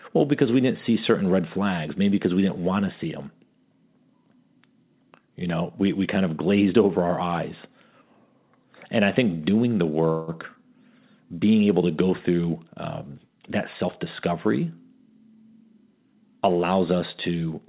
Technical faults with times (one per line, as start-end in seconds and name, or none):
10.10-10.30 call audio freeze
14.31-16.16 jitter buffer speed-up